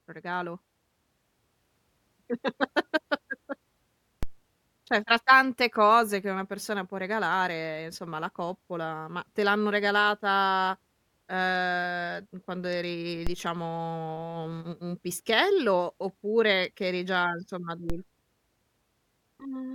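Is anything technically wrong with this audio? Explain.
Yes. The speech has three DC steps, at 4.23 s, at 13.27 s (after "quando eri" and before "diciamo un un un"), and at 17.90 s (after "che eri già insomma"). At each one the waveform's zero line jumps by about −18 dBFS (about −19 dBFS for the last), and a 5 Hz high-pass drags it back over a few tens of milliseconds. On the waveform the trace lurches off centre and slides back. A spectrogram shows a brief broadband vertical line with energy concentrated at the bottom. Each step is heard as a low thump under the speech.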